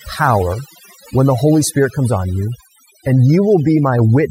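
Overdone noise removal runs through the whole clip. A noise reduction stage set too strong drives any frequency band near its noise estimate down or off, taking the softer parts of the speech with it. The background drops and breaks up into twinkling specks.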